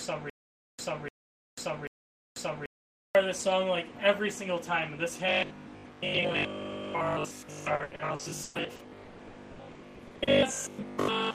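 From the start of the clip until 3.15 s there is a stutter with silent gaps, already under way when the audio begins. A 0.30 s fragment plays, then about 0.49 s of digital silence follows, repeating three times every 0.79 s. The likely cause is a stalled player replaying its last fragment at each retry while the intervening audio is lost.

From 5.29 s to the end, the sound takes on a rigid metallic buzz at 50 Hz. This is robotic sound from repeated short buffers. A 50 Hz repetition rate fits a 20 ms buffer being looped, and most of the stretch, roughly 70 percent, is repeated material rather than new audio. Input likely arrived too seldom to keep the output fed.

Inside that stretch, from 7.75 s to 10.30 s, repeated packet loss adds choppy, robotic breaks. There are fifteen gaps, the longest 160 ms. Each is patched by extending the preceding sound, so 920 ms of real audio is missing and replaced, about 36 percent of that span.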